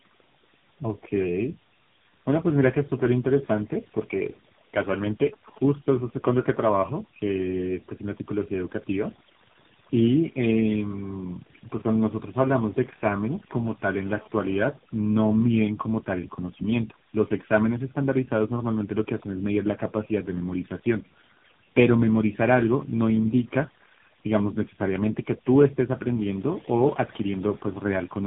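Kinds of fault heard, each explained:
Overdone noise removal: A noise reduction stage set far too aggressively has been run across the whole recording. It pulls individual frequency bands down to almost nothing wherever they sit close to its noise estimate, so the background between phrases drops to near silence dotted with twinkling specks. Softer parts of the speech are caught too. On a spectrogram the gaps look almost black, scattered with isolated bright dots, and the edges of the speech look ragged.
Tandem speech coding: The speech has been through three separate speech codecs in a row, with the final link sounding like AMR-NB at a low rate, around 7.95 kbit/s. Each border decoded the signal and encoded it again, so every coder inherited the previous one's damage and added its own. The result is rougher, more muffled and more warbly than any single codec would leave. A spectrogram shows nothing above 3.8 kHz for the full clip, and the harmonic bands look smeared.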